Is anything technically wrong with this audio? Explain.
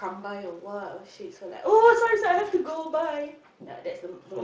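No, nothing is technically wrong with this audio.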